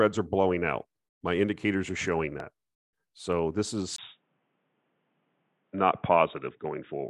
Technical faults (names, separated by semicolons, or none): loud pop; input switched to a poorer device